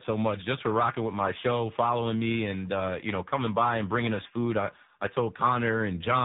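Tandem speech coding runs through the whole clip: the speech passed through two speech codecs in a row, with each re-encoding the previous one's decoded output. The result sounds rougher and noisier, with a muffled, warbly quality typical of AMR-NB, and nothing above 3.8 kHz.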